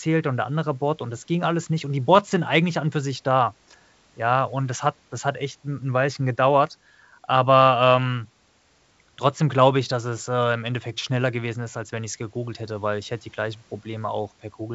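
A speech clip carried over G.722 wideband telephone coding, which keeps its clear band up to 7 kHz. One fault stands out: bit errors on an ADPCM link, from 2.15 to 2.21 s, between "alles nicht und die" and "sind eigentlich an und". A rough burst with pops and a brief level change lasts about 60 ms. Flipped bits upset the decoder's step size and predictor, so each error rings on briefly. The error rate is low, about 0.07 percent.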